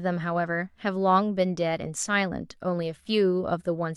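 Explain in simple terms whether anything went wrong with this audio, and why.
Nothing stood out as going wrong on listening to this speech recording.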